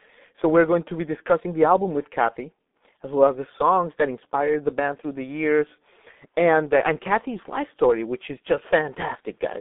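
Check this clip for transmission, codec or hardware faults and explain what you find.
One codec fault runs through the whole clip: the speech carries heavy G.723.1 codec damage from start to finish. The sound is confined to about 200 Hz to 3.6 kHz, and the coarse, hoarse texture fits a low-rate setting near 6 kbit/s. The codec rebuilds the voice from a sparse model refreshed only every 30 ms, so consonants smear and the voice turns muffled and rough. On a spectrogram, the energy stops sharply at both band edges, and the harmonics look blurred and blocky.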